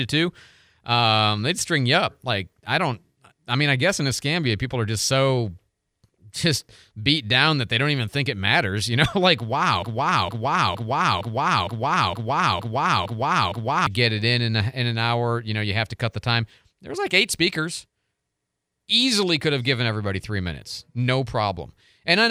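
From 9.83 to 13.87 s there's a broken-record loop: a 0.46 s fragment repeats nine times, likely a stalled stream, before "get it in in" resumes.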